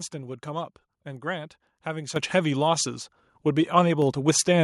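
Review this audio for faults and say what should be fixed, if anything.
The microphone volume stepped up twice, at 2.16 s by about 9 dB and at 4.02 s by about 3 dB, as the call software raised the input volume. Voice and background jump together, seen as abrupt envelope steps and brighter spectrogram bands. Fix the input level beforehand and disable automatic microphone adjustment.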